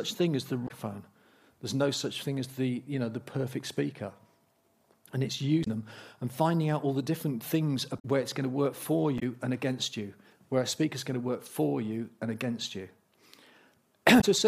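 Damaged data in a compressed stream hits at 0.64, 5.61, 7.98, 9.16 and 14.17 s. Each time, corrupt frames throw the decoder off sync, giving a 70 ms blip.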